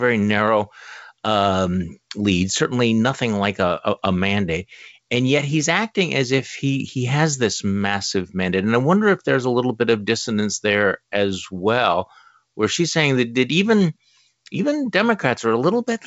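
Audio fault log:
No faults to log for this speech clip.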